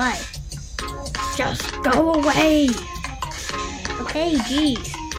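No technical faults can be heard anywhere in this audio.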